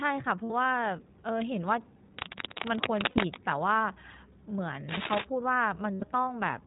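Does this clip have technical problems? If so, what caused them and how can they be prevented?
Yes. iLBC codec damage runs throughout: speech is cut off above 4 kHz and sounds rough and synthetic, fitting a 15.2 kbps mode with 20 ms frames. Use a wideband codec instead.

Lost iLBC frames occur at 0.44–0.52 s, 3.10–3.19 s and 5.94–6.04 s. The decoder fills each gap of 60, 60 and 80 ms with a held, buzzy repeated pitch cycle, and the speech then recovers at once. A steadier network or forward error correction would prevent this.

Cable scratch noise occurs at 2.18–3.36 s and 4.89–5.25 s. Dense, uneven rustling about as loud as the speech is likely caused by a worn cable or connector shifting its contact resistance. Replace or secure the cable.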